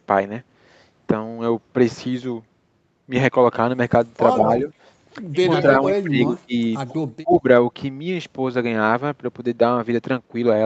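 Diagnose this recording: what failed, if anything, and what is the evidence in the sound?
Speech suppressed in double talk, likely from the call's echo canceller: the voice dips about 5 dB at 4.36–4.68 s, then drops far deeper, about 25 dB, at 5.96–6.53 s and 7.2–7.45 s. The canceller can't tell this talker from the far side and ducks both.

Echo leak, likely a loudspeaker end whose canceller let its microphone pickup through: a copy of the voice trails by about 139 ms at 5.44–5.62 s, 5.86–5.91 s and 6.87–7.0 s, fading from roughly 5 dB to 25 dB below the direct sound.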